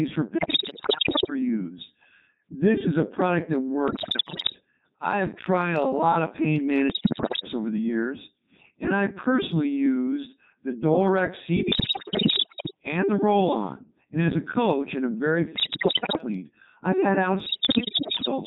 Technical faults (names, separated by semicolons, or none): Codec 2 vocoder; bit errors on digital voice radio